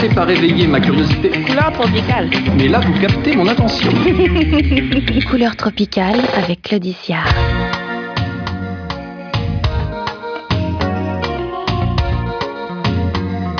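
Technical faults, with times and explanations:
No technical faults can be heard.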